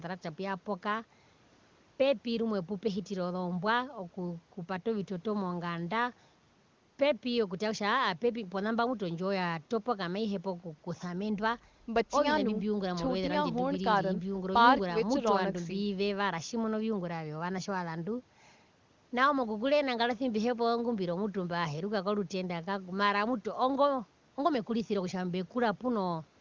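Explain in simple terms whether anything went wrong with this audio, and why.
Nothing went wrong here: the speech passed through ordinary call microphone processing and an AMR wideband (HD Voice) link, which together cap the sound at about 7 kHz, exactly as such a call is meant to.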